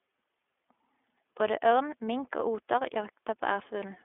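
Throughout, the speech has passed through the iLBC codec, coding each 20 ms frame independently at a rate that fits its 15.2 kbps mode. Nothing above 3.7 kHz survives, and the plainly audible coding leaves the speech thin, rough and slightly synthetic.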